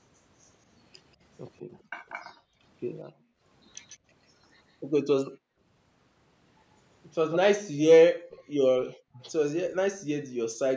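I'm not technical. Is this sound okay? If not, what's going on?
No. Background gated by the echo canceller, at 1.81 to 3.43, 5.31 to 5.6, 8.18 to 9.18 and 10.24 to 10.36 seconds: while the loudspeaker played, the call's echo-removal system turned this microphone down hard, so the room sound briefly drops away and then returns.

Echo leak, at 3.88 to 3.98, 5.25 to 5.3, 7.31 to 7.38 and 8.31 to 8.42 seconds: short scraps of the speech repeat about 140 milliseconds late (214 at the last one). They are clearest at 7.31. This is likely leftover loudspeaker sound that the echo canceller failed to remove and sent back.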